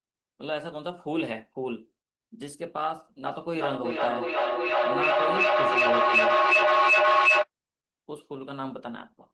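Feedback echo between two devices runs from 3.26 s to 7.49 s in this speech clip. Two devices in the same room share the call, and each microphone picks up the far device's loudspeaker replaying its own sound. Each device's echo canceller only removes what that device itself plays, so the loop stays open. Phrases return roughly every 0.4 s, each pass thinner and more ringing. At the loop's loudest, the repeats rise to about 10 dB above the speech and pile up instead of fading. All of this arrives through the call codec path, whose top end stops around 12 kHz.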